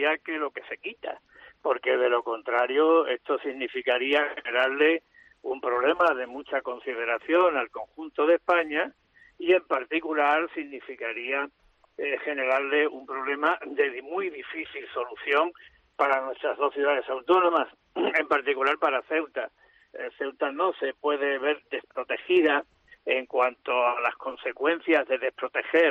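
No technical faults are audible anywhere in the recording.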